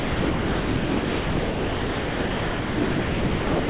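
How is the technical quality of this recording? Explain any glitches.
Poor: the speech is almost entirely missing. The sender's voice detector most likely classed the talker as background and stopped transmitting, so the receiver filled the gap with comfort noise. This is sound dropped by the voice detector, running from 0.0 s to the end, with only about 30 ms of real signal surviving. What you hear is a steady, featureless hiss in place of speech, band-limited to 4 kHz by the G.711 mu-law call path, which fits a 64 kbps narrowband link. The room noise, about 33 dB below the speech level, is part of the original recording.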